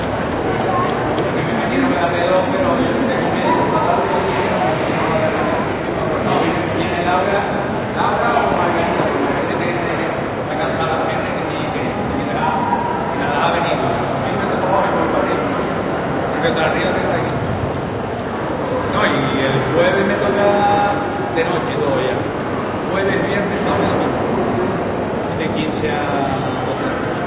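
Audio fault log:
No faults were found anywhere in this recording.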